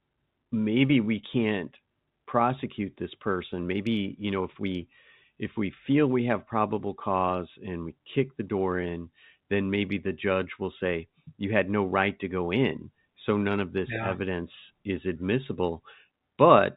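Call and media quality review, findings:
No faults found; telephone-band speech audio as expected.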